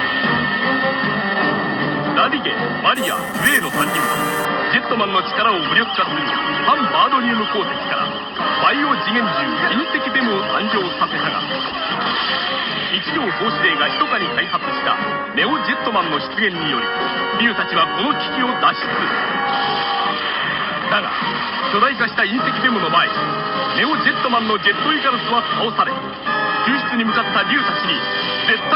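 The audio has imaging from sample-and-hold upsampling between 2.95 and 4.45 s. It's a metallic fizz following the sound, with images from 5.5 to 11 kHz at about -12 dB, which fits an 11 kHz rate held up to 48 kHz.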